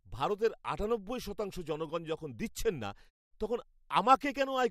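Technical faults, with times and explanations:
No technical faults can be heard in this speech recording, and the signal stays intact throughout.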